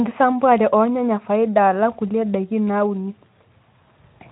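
No technical faults can be heard in the recording; it is carried by the Speex codec at a light setting that fits a bitrate of about 15 kbps, with nothing above 3.9 kHz.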